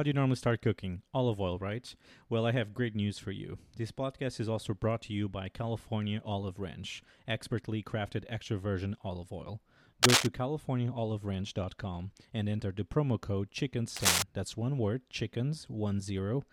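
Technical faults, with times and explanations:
10.03–10.27 s and 13.96–14.22 s, cable scratch noise: two quarter-second bursts of dense, ragged scratching ride over the speech, the first right after "extra virgin olive oil" and roughly 10 dB louder than the voice, the second after "enter the promo code" and before "that's one word", about 5 dB above it. The likely cause is a worn cable or connector being moved, its contact resistance flickering rapidly.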